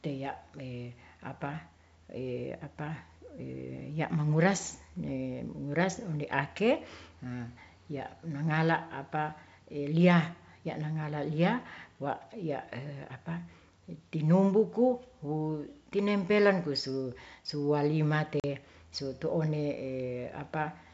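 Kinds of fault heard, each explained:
Packet loss on an ADPCM call: at 18.40 s the speech drops into a hard-edged silent hole about 40 ms long, roughly a couple of packets' worth, over the G.722 wideband link. What sets it apart from a plain dropout is the re-entry. The decoder's adaptive predictor and step size have drifted from the sender's, so the speech comes back slightly distorted, then settles within a few tens of milliseconds.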